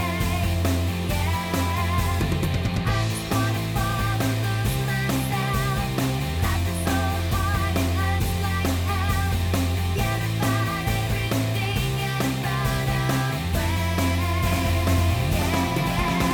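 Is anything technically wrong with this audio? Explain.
Yes. From 14.46 s to the end, a doubled audio track appears, likely because the signal is being captured a second time through a slower path and mixed back in with the original. A full-band copy trails the original by about half a second, a few decibels quieter, with no decay or room colour. It cuts in abruptly at 14.46 s, so everything after that point is heard twice, the second pass flat and out of step.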